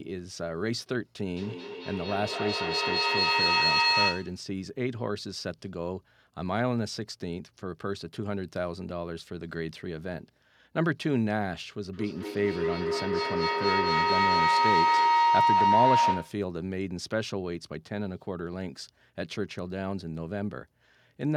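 From 1.3 to 4.48 s the speech comes back at a steady interval of about a fifth of a second, each return thinner and more ringing, and the repeats pile up to about 6 dB above the speech. This is feedback echo between two devices: one plays what the other's microphone sent, and that microphone picks it up again.

From 11.93 to 16.53 s a tone around 1 kHz swells to about 7 dB above the speech, pulsing roughly every fifth of a second. This is feedback howl, where the microphone-to-loudspeaker loop gains level on each trip and narrows to the frequency it favours.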